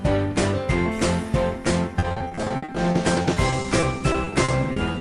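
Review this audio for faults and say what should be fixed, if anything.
From 1.99 s to the end at 5.0 s there is repeated packet loss (robotic sound). Twenty-seven brief holes, none longer than 60 ms, are each filled by stretching the preceding sound, so about 22% of the stretch is patched. A single dropout would leave one isolated gap. Here the gaps recur closely, which gives the sound its choppy quality. A more stable network path, a deeper jitter buffer and forward error correction would prevent it.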